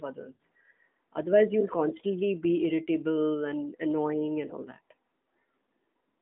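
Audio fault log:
0.34–0.39 s, 1.98–2.02 s and 4.48–4.53 s, lost AMR speech frames: the decoder repeats its last good pitch and vocal tract settings at falling gain. The 60 ms gap, which fits three 20 ms frames, smears and fades. The two 20 ms losses are brief dips.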